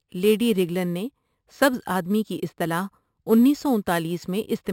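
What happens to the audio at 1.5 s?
At 1.5 s, as throughout the clip, the speech suffers imaging from sample-and-hold upsampling. Each sample was repeated without a smoothing filter, which fits a rise from a 12 kHz rate. A mirrored spectrum copy between 6 and 12 kHz, about 21 dB below the speech, adds a metallic fizz that tracks its loudness.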